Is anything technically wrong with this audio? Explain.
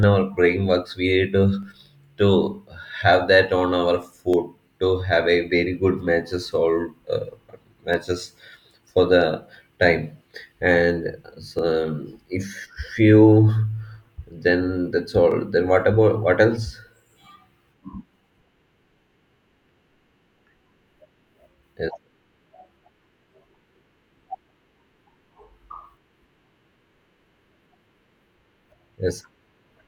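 Yes. The speech has five isolated clicks, at 1.63, 4.34 (between "have that on our" and "to have a very"), 7.94, 11.59 and 15.31 s (after "then that's"). Each is likely dropped samples: a fraction of a millisecond is missing, so the waveform jumps abruptly, producing a sharp click without removing audible sound.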